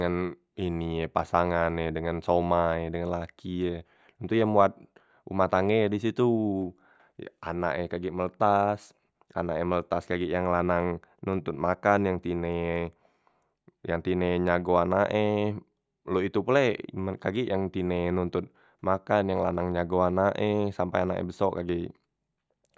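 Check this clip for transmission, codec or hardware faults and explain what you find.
No transmission, codec or hardware faults can be heard anywhere in the speech signal, which stays continuous and stable throughout.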